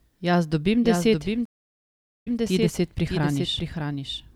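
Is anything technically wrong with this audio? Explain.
Yes, there are two problems.

All the way through there's a doubled audio track: a second, full-band copy of the speech trails the original by roughly 0.7 s, sitting only a few dB quieter, around 5 dB down. It has no room colour or decay, just a clean duplicate out of step. The likely cause is the same signal being captured again through a slower path, or an edit leaving two copies misaligned. It gives everything a stuttering, overlapping feel.

At 1.45 s, right after "dobim deset", there's a stream reconnect. The connection dropped and the audio goes silent for about 0.8 s. Then the player reconnected and started a fresh decoder mid-stream, with the first instant coming back muted or fading in. At 2.38 s the speech picks up again at "ti deset", but from a point about 120 ms earlier than where it cut out, so a short stretch gets replayed as the server resends a burst.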